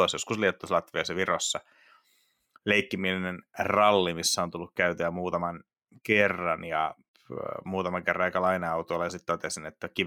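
Speech recording with no technical faults to report.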